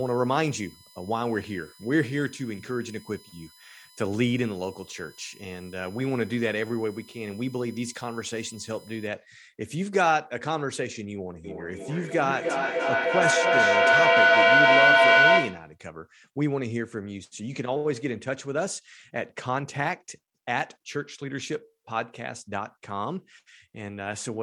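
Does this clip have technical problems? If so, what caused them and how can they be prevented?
Yes. USB whine runs from 0.00 to 9.07 s as a steady, fixed-pitch tone built on 1 kHz, with its strongest component at the fifth harmonic, 5 kHz, sitting roughly 25 dB below the speech. The bus draws current in regular 1 ms frames, and those pulses leak through shared power or ground into the audio path, producing a whine locked to that frame rate. Using a powered hub, a ground-loop isolator or a separately powered interface prevents it.

Feedback echo between two devices appears from 11.44 to 15.78 s. The speech returns roughly every 300 ms, growing thinner and more ringing with each pass, and the repeats build up instead of fading, peaking at about 9 dB above the original speech. Two devices in the same room are on one call: one plays back what the other's microphone sent, and that microphone captures it again. 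Each device's echo canceller removes only its own playback, so this loop is never cancelled. Muting the speaker and microphone on all but one device in the room, or using headphones, prevents it.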